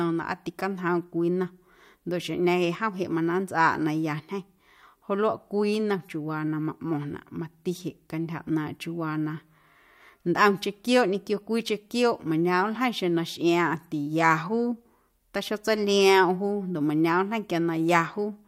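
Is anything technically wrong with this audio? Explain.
Yes, from 0.10 s to 18.42 s there are clock slip clicks, a soft rattle of ticks every 70 ms or so, a couple of hundred in all. It's likely two devices on unsynced clocks, off by a few hundred ppm, dropping or repeating one sample each time.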